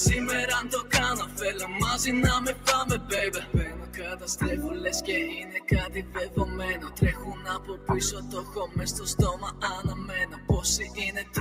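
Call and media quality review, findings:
Noise suppressor applied to music or sounds, whole clip. Speech-tuned suppressor left active; sustained content and tails classed as noise and pulled down, with gain swinging by around 10 dB. Onsets pass, held material sinks. Audible pumping and thinning across the clip.

Lost LE Audio frames, 3.18–3.20 s. About 15 ms of audio missing, consistent with two dropped frames. LC3 concealment repeated the last spectrum with randomised signs, so tonal content briefly smears into noise. Short enough that no fade-to-silence develops.

Sound cut by the noise suppressor, at 3.44–3.97, 5.46–5.61, 6.03–6.37, 7.35–7.89, 8.45–8.76, 10.26–10.49 and 11.19–11.34 s. Suppressor misreads steady or decaying sound as noise and attenuates it harder than the surrounding material. Drops of about 4 dB (5.46 s) to about 7 dB. Decays truncated, sustains sag, each lasting a fraction of a second. 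Codec damage is light, typical of the lossy link at this rate.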